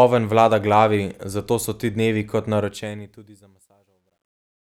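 From 2.6 s the speech fades out toward the end at 4.72 s and picks up truncation distortion on the fade. The level steps are too coarse and undithered, which fits roughly 12-bit resolution. From 3.44 s the tail turns gritty, unlike a clean gate cutting out.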